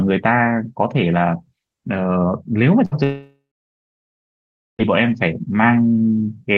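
A speech recording carried over an Opus call path at what sounds like about 24 kbps, with the top end stopping near 12 kHz. It has two gaps close together. At 2.85 s a burst of packet loss takes out about 60 ms of audio up to 2.93 s. The receiver fills the hole by stretching the last sound and fading it, so a short buzzy or hissy smear replaces the real signal before speech jumps ahead. On a spectrogram this shows as a brief band of repeated, blurred content that dims out, and on the waveform as a small, regular, decaying stretch with a discontinuity where audio resumes. Only a tenth of a second later, from 3.03 s to 4.81 s, comes a long network dropout, likely a stall in packet delivery, that removes about 1.76 s of sound. Concealment again carries the last sound forward as a fading buzz or hiss for a few tenths of a second. After that, roughly 1.4 s of silence or faint steady noise follows until speech returns mid-stream with the lost portion simply gone. 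Visually it appears as a smeared, fading tail and then a near-empty gap in both spectrogram and waveform, ending in an abrupt restart.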